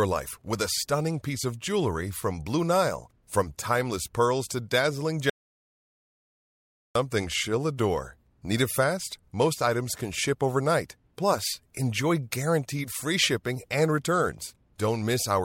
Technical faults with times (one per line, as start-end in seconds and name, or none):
5.30-6.95 audio dropout to silence